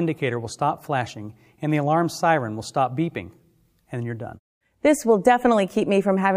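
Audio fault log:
No faults detected; nothing to log.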